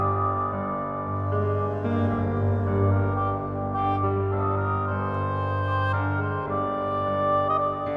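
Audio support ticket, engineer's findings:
No faults found on listening. Nothing in the capture or playback chain calls for further action.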